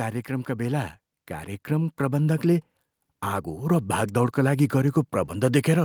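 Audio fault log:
1.67–2.49 s, automatic gain rising: the gain control judged the input too quiet and raised its gain by about 3 dB, so speech and background swell together.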